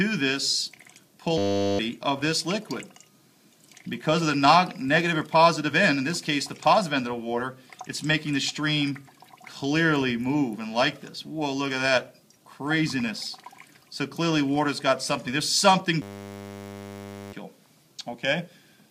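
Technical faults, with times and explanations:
1.38–1.79 s and 16.02–17.33 s, system hang loop: The system stalled while the sound hardware kept replaying one 10 ms slice of its buffer. That slice repeats 100 times a second. At that rate the repeats merge into a steady 100 Hz buzz rather than a stutter. When normal sound resumes, roughly 0.4 s and 1.5 s of audio are missing. The loop length fits a very short output buffer.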